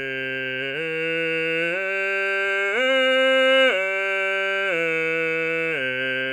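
No faults are audible anywhere in the music.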